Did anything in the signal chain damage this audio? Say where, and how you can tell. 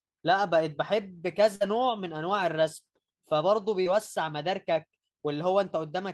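Yes, at the network stage. A burst of packet loss runs from 1.55 to 1.62 s. About 60 ms of speech never arrived in time, and the receiver covered 50 ms of that by extending the last sound and fading it down, which gives a held, decaying tail. Playback then picks up later in the phrase, so the missing section is simply skipped rather than delayed.

A short concealed packet loss occurs between 3.82 and 3.88 s, also on the network side. Here about 40 ms failed to reach the decoder, and the receiver synthesised 32 ms of continuation from the preceding sound before crossfading back into real audio. The result is a brief smear at that point rather than a clean dropout, which is the signature of loss concealment working over a small gap.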